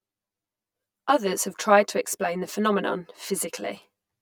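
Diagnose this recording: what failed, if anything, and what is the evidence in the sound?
Channel delay (comb filtering) throughout: a buffer offset leaves one channel about 10 ms late, so the mono sum sounds hollow, notched evenly from roughly 50 Hz.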